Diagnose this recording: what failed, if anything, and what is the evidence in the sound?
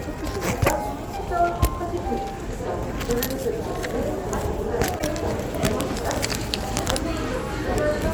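A broken MP3 bit reservoir, likely, at the codec stage, from 4.98 to 5.02 s: the audio jumps ahead and a garbled patch of about 44 ms follows. Frames were cut out, so the next 26.1 ms frames reached back for borrowed data and decoded bytes from another frame.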